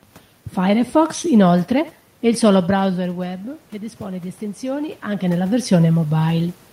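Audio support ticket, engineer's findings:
Voice and room noise swell together, slow steady rise from 0.98 s to 5.75 s, about 6 dB overall. Automatic gain rising: AGC judged the input too quiet and ramped gain up gradually. Level shifts near 2.5 s and 5 s are talker movement.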